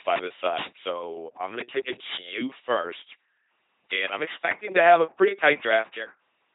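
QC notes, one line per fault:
Throughout: LPC-10 vocoder. The speech is rebuilt from a buzz or noise source through a crude vocal-tract filter, giving a flat, mechanical robot quality with heavy damage, consistent with a 2.4 kbit/s rate. Nothing is present above 3.8 kHz.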